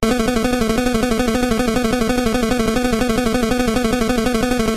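At 1.35 s there is an overlap between stream segments. Two consecutive segments claimed a few milliseconds of the same timeline, and the player trimmed that stretch away even though it was not actually duplicated. The waveform jumps straight ahead, producing a single brief click or micro-skip. Unlike a dropout, no gap of silence or smeared concealment fills the spot. Only one occurs, which fits segment boundaries spaced about 6 s apart.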